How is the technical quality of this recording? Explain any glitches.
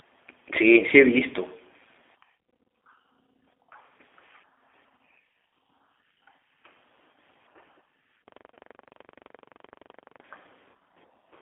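The recording has noticeable quality problems: coding damage throughout, a long stuck-buffer stutter, and two short dropouts.

The G.729 codec (the G.729A variant) affects the entire clip. The speech is squeezed into a telephone band of roughly 300 Hz to 3.5 kHz and is rebuilt from a vocal tract filter, a pitch predictor and a few pulses per frame, which fits a bitrate of 8 kbit/s. The result is a rough, slightly synthetic timbre. That artificial texture is what separates it from ordinary band-limiting, which would muffle the sound without adding any artificial quality.

A system hang loop runs from 8.28 to 10.21 s. The host stalled while the audio hardware kept replaying the same ring buffer. One 42.7 ms slice repeats exactly, about 45 times, at 23.4 Hz, which fits a 2048-sample buffer. It sounds like a rapid machine-gun stutter. Every repetition is identical, whereas a concealment fault would drift and fade.

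VoIP packet loss concealed by the speech codec occurs twice, at 8.54 s (inside the stutter) and at 10.71 s. Each gap is about 30 ms, consistent with a single lost packet. The decoder extended its last pitch and filter settings while reducing the gain. You hear a brief buzzy or noisy smear that fades, and the speech stays weakened for a short time afterward. The concealed segment decays and changes as it goes, unlike the exact repeats of the hang loop.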